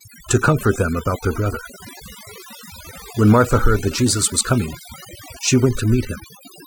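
Overdone noise removal on this speech runs throughout: the reduction is set too strongly, leaving near-silent gaps with twinkling specks.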